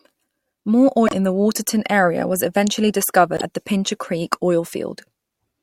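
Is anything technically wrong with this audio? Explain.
Yes, there are two short glitches where the speech skips forward. The first runs from about 1.06 to 1.13 s, just before "in the". The second runs from 3.36 to 3.41 s, between "area was eventually" and "at the". With frames of 26.1 ms, the first lasts about two and a half frames and the second about two. The likely cause is a broken MP3 bit reservoir: frames went missing, so the next frames reached back for borrowed data that wasn't there and decoded garbage until things resynced.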